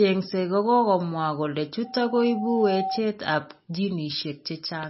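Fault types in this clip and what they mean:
MP3 compression: The whole clip sounds watery and swirly. Nothing is heard above about 5.6 kHz, so the treble is sharply cut off. S sounds turn dull and chirpy, and attacks smear. Weak detail flickers in and out from moment to moment. This is likely heavy MP3 encoding at a low bitrate. The damage fits a rate near 24 kbps, where the encoder drops the top band and zeroes quiet frequency lines to save bits.
loudspeaker feedback squeal: Right after "kokokomwaa kole", at 1.84 s, a single steady tone appears at 767 Hz. It swells over roughly a second until it is about as loud as the speech itself. It holds there until 3.03 s, then stops. The microphone was picking up the loudspeaker it fed. At 767 Hz the loop gain passed one, so that tone kept feeding itself and grew into a howl.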